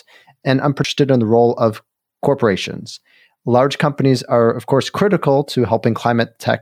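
At 0.84 s the CD skip occurs: a knock or a flaw in the disc throws the laser off its track onto a neighbouring turn of the spiral, so the player briefly mutes and resumes reading from a different point in the recording. In this speech clip that comes through as a short tick, with a gap of only a few milliseconds, followed by an abrupt jump in the audio's continuity just before "in the role of".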